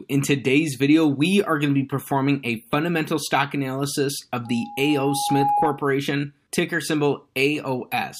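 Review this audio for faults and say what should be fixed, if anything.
Loudspeaker feedback squeal runs from 4.45 to 5.87 s: the microphone hears its own loudspeaker, and at 824 Hz the loop gain passes one, so a pure tone swells over roughly a second to sit above the speech. The gradual swell separates it from a steady hum or test tone. Lower the monitor gain, move the microphone away from the loudspeaker, or notch 824 Hz.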